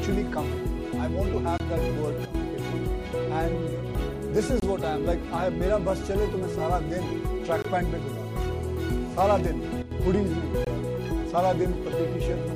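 A 23 ms gap between chunks opens at 1.58 s, with hard-edged silence at the join between 3.0 s chunks. It recurs at 4.60, 7.62 and 10.65 s. At 2.25 to 2.35 s, a sudden gain jump drops sound and background together by about 10 dB, likely from a gain step applied without a ramp. From 8.52 to 9.41 s, a steady, raspy GSM phone buzz at 217 Hz, about 22 dB below the signal, comes from rectified call bursts. A second gain jump of about 11 dB follows at 9.82 to 9.91 s.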